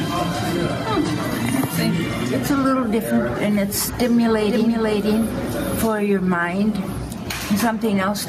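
Gain pumping runs through the whole clip, with the gain swinging by roughly 10 dB, so the dynamics feel squashed. The likely cause is input gain set far too high, with a fast limiter clamping each peak. A doubled audio track appears from 4.41 to 5.93 s: a full-band copy at about the same level trails the original by around half a second, with no decay or room colour, and it starts and stops abruptly. It likely comes from a second, slower capture path or misaligned edit.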